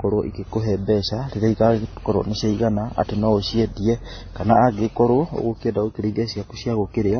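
From start to finish the speech sounds dull and smeared, with nothing above about 6.3 kHz, and it carries a mix of swirly, watery artefacts that don't sound like the work of a single coder. The likely cause is transcoding between lossy codecs, a chain that points to AAC, then MP3, then WMA at low bitrates, each stage spending its bits re-encoding the previous stage's damage and adding its own.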